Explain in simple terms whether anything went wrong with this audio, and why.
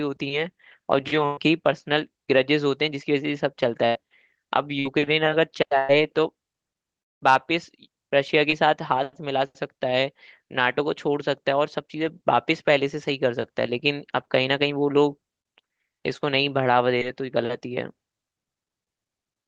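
Four times the speech catches on a held buzz or fading hiss and then jumps ahead, at 1.25 to 1.39 s, 3.87 to 3.97 s, 4.79 to 4.87 s and 5.79 to 5.91 s. This is a burst of packet loss. Between about 60 and 120 ms of sound never arrived, and the receiver stretched the last sound to cover the gap.

At 7.01 to 7.22 s the sound fades out and goes almost silent for about a fifth of a second, then returns with a piece missing. This is a long network dropout, likely caused by the connection briefly delivering no audio at all.

At 8.50 to 8.54 s and again at 16.98 to 17.02 s there is a tiny smear or wobble. This is short concealed packet loss, where a few hundredths of a second went missing and were patched over by continuing the previous sound.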